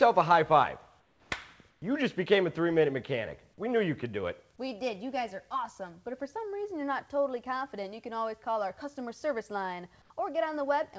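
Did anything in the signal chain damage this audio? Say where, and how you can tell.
Yes. Comfort noise in place of the background at 1.00–1.30, 1.70–1.82 and 10.02–10.10 s sounds flat and about 3–6 dB quieter, likely synthetic fill during discontinuous transmission in call processing.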